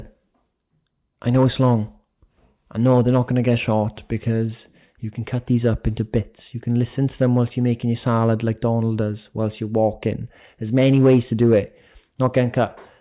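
A speech recording with no technical faults to report.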